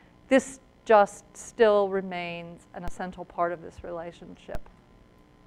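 A low thump or click at 2.88 s and again at 4.55 s, with the sound itself carrying on unchanged. Each is a DC step: the waveform's zero line jumps by about -22 dBFS, then decays away at a rate matching a 5 Hz high-pass.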